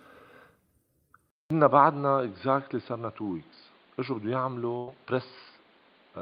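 Speech that, at 1.30 s, drops out for about 200 ms and comes back dull and boxy, with nothing above roughly 4.8 kHz, a level a few decibels lower, and a new background noise sitting well below the talker, around 35 dB down. It stays that way to the end. The likely cause is the input switched to a poorer device partway through, such as another microphone or a headset's call profile, with its narrower band, different tone and its own noise floor. Later, from 4.77 to 4.89 s, the sound freezes and fades for about 100 ms before carrying on, and a similar stretch of the speech is simply gone. That is a burst of packet loss: the receiver stretched out the last sound it had and faded it while the missing audio never arrived, then resumed further along.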